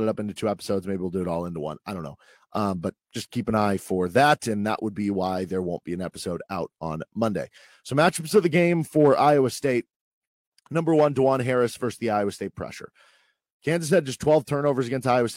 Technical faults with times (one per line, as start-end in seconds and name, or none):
none